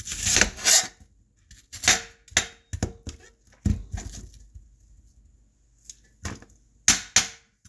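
No audible faults present.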